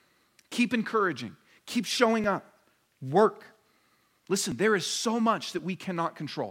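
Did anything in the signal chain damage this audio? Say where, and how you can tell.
Yes. Dropped buffers (overrun) at 2.24 s, between "encouraging keep" and "up work", at 4.52 s, before "there is so", and at 5.59 s, after "there is so". Each is a jump ahead in the sound, roughly 5 to 20 ms, with no silence. The likely cause is the driver or buffer stage, where input samples were overwritten before the program collected them.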